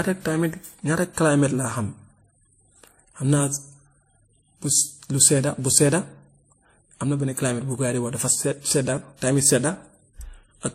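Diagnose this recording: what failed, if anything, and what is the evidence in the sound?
At the codec stage, the audio was likely passed through one lossy encoder and then re-encoded by another, a case of transcoding between lossy codecs. Across the whole speech clip there is nothing above 15.8 kHz. Two layers of artefacts sit on top of each other. The pattern points to a low-rate MP3 pass, around 43 kbit/s, followed by WMA at about 64 kbit/s. The second encoder spends bits reproducing the first one's artefacts and adds its own.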